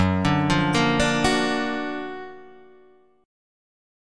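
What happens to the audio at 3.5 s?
Nothing goes wrong at 3.5 s; the audio runs on intact through that moment.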